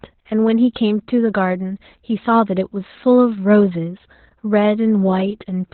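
The speech in this clip has been through Opus voice compression throughout, at a very low rate in its SILK linear-prediction mode, which fits roughly 8 kbps narrowband. Nothing survives above about 4.3 kHz, and the coarsely coded excitation leaves the voice muffled, hoarse and faintly robotic.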